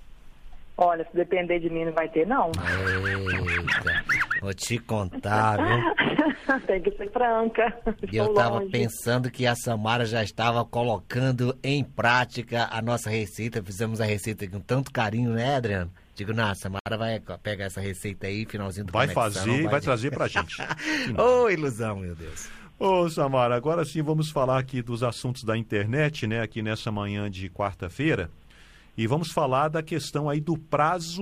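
At 16.79 to 16.86 s, a gap at a join of encoded pieces drops about 69 ms of silence. Encoder delay and padding stayed in. Sound then resumes where it stopped.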